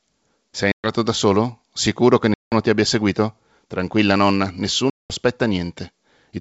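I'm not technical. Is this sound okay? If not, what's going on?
No. This speech has packet loss on an ADPCM call: the sound cuts to silence at 0.72–0.89 s (before "da solo"), 2.34–2.55 s (before "ti abbia seguito") and 4.90–5.14 s, as batches of data go missing. Each time, the decoder briefly loses track, so speech returns with a click or distortion.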